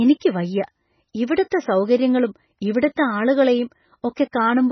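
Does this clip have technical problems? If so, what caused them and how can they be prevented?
Yes. Throughout the speech there is heavy MP3 compression damage, likely from encoding at a very low bitrate, and the sound fits something near 16 kbps. Nothing survives above 6 kHz, so sibilants lose their edge, and the remaining spectrum has a watery, swirling texture as weak frequency lines drop in and out from frame to frame, with smeared onsets. A plain low-pass filter would also remove the top but would leave what remains steady. Encoding at a higher bitrate, or keeping an uncompressed master, would prevent it.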